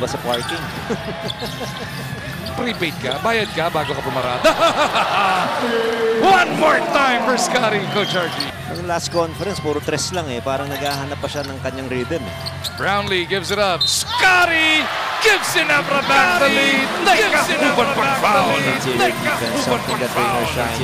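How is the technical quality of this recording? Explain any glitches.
The recording has one clear fault, a doubled audio track from 16.02 s to the end. The sound is likely being captured a second time through a slower path, so a full-band copy about two seconds late and roughly 5 dB quieter cuts in abruptly, running dry over the original without decay or room colour.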